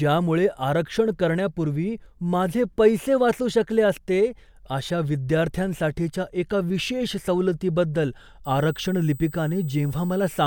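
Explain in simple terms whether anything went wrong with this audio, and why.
Near the end, from 8.45 s through to the last moment, a thin, steady high-pitched whine creeps in under the speech. That's USB whine: the USB bus pulls power in rapid 8 kHz bursts, leaking into the audio as a fixed tone, strongest at 16 kHz here.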